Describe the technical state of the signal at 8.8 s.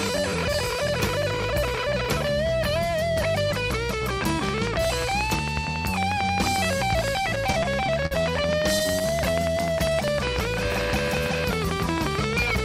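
At 8.8 s, a train of clicks runs from 4.21 s to the end. It ticks regularly, about 11 per second, roughly 15 dB above the sound. Interference or a faulty connection is the likely cause.

Repeated stalls (stutter) also occur, from 8.79 s to 9.14 s. Late packets emptied the jitter buffer four times. The receiver held the sound for 46 ms in total, with nothing lost, so playback drags briefly.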